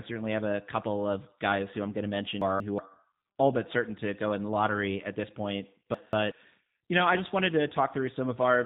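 Throughout, the speech passes through the G.729 codec, whose roughness fits an 8 kbit/s stream rebuilding speech from a filter and sparse pulses. Nothing above 3.8 kHz survives, leaving a thin, slightly synthetic tone. From 2.42 to 2.79 s, after "I'm going to mention" and before "all but certain to", chunks arrive out of order: a 186 ms chunk lands one slot late, producing a jumbled swap. The same chunks-out-of-order fault repeats from 5.94 to 6.32 s, between "lottery at this point" and "you know I just".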